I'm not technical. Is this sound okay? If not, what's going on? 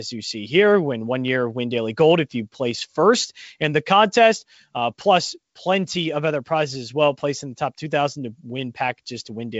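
Yes, it sounds fine.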